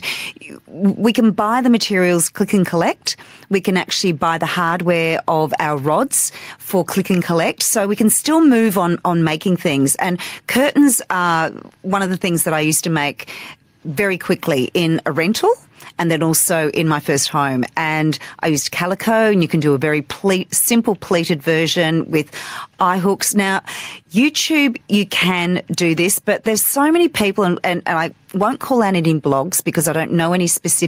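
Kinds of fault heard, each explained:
Gain pumping: Throughout the speech, the level is pulled down under each loud syllable, a swing of around 10 dB. This is likely a fast limiter clamping down on input gain set far too high, leaving levels squashed and compressed.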